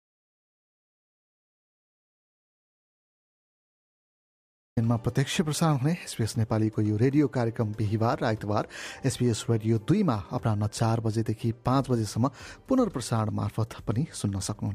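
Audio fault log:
0.00–4.77 s: audio dropout to silence. The clip opens in silence, with no room tone or noise floor, and sound arrives abruptly at 4.77 s. The input was likely lost before the clip began, with silence written until the signal returned.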